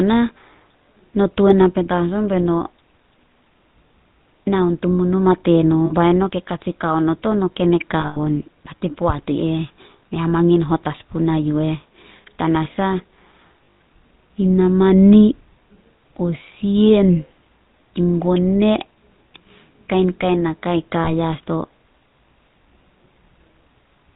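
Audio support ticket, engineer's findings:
GSM full-rate codec across the whole clip: buzzy, gravelly speech, nothing above 4 kHz. Sounds like 13 kbps full-rate coding, with pulse-driven excitation rebuilt from sparse samples.

Lost GSM frames at 5.86–5.93 s and 21.04–21.10 s: short metallic ring where the decoder repeats the last good frame. At 8.00–8.17 s and 13.64–13.77 s: patchier drops, longest around a tenth of a second.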